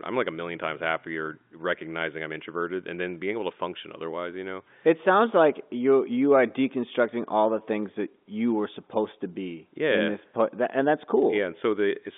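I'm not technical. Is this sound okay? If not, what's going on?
Yes, nothing is wrong here: the speech comes through standard G.711 telephone coding, so it has the narrower, slightly boxy sound of an ordinary landline call, which is normal.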